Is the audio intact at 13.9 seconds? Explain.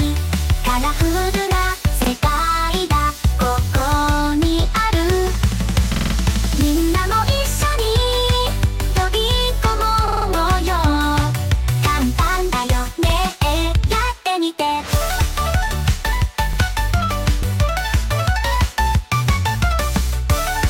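Yes, at 13.9 seconds the audio is intact, with no dropout, click, distortion or other fault at that moment.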